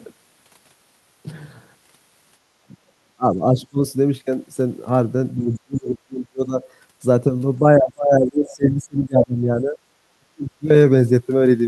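An echo canceller likely confused double talk with echo and cut the talker, producing speech suppressed in double talk at 2.6–3.8, 5.36–6.56, 7.77–9.77 and 10.17–10.65 s, with dips of up to about 40 dB. Within these spans, the same canceller likely missed some loudspeaker signal, letting the other side's voice leak through faintly, about 25 dB below the talker, at 5.53–5.59 and 8.48–8.54 s.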